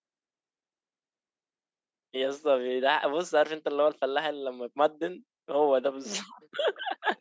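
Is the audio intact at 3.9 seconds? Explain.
Yes, the speech at 3.9 seconds is intact, with nothing disrupting it beyond the normal narrowing of a call microphone path, which leaves nothing above 8 kHz and trims the deepest bass.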